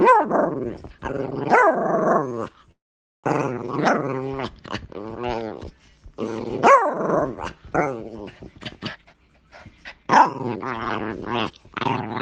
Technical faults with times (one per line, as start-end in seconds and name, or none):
2.71-3.26 call audio freeze
8.93-12.05 jitter buffer speed-up